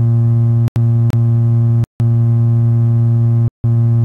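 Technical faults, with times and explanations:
0.68 to 0.76 s, 1.84 to 2.0 s and 3.48 to 3.64 s: block of digital silence. The sound drops straight to silence three times, first for 80 ms, then twice for 160 ms. There is no fade in or out. This happens when the output buffer is not filled in time and zeros go out instead. The longer holes sound more like brief cut-outs than pops.
1.10 to 1.13 s: gap between stream segments. A hole of about 28 ms interrupts the sound. It has abrupt edges. Two segments of the stream do not join in time, and the player fills the space between them with silence. Nothing is missing from the audio itself. Time has simply been inserted, so the sound stops briefly and resumes where it left off. It is shorter and tighter than the other dropouts.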